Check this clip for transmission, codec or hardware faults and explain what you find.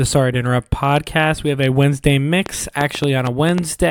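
There's one fault here, a train of clicks. From 2.46 s to the end, about seven same-shaped pops tick unevenly over the speech at roughly 4.7 per second, standing well above it, likely from electrical interference or a struggling interface.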